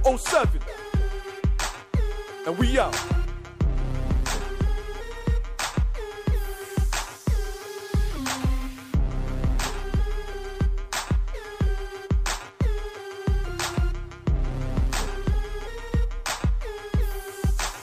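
No technical faults occur anywhere in the audio, so there is nothing to describe in time order.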